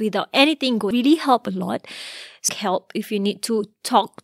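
At 0.91 s and again at 2.49 s the speech is broken by a brief glitch, a chirp, squawk, click or short hole, the sign of damaged data in a compressed stream. Corrupted bytes at those points leave the decoder unable to read the frame correctly, so it loses sync and hunts for the next valid frame header. On a spectrogram each event shows as a thin vertical discontinuity cutting across the speech harmonics, and the waveform shows a short, abrupt break.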